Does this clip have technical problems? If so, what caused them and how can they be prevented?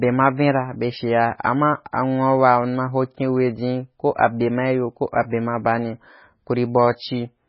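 Yes. Throughout the speech the sound is watery and swirly, with a metallic, chirpy edge on s sounds and smeared consonant onsets. Nothing is present above 5.5 kHz, so the top end is dull. The likely cause is heavy MP3 compression at a bitrate that fits roughly 16 kbps. Starved of bits, the encoder cut the treble at a fixed point and dropped weak frequency components that flicker in and out between frames. To prevent this, encode at a much higher bitrate, such as 128 kbps or more, or keep an uncompressed master.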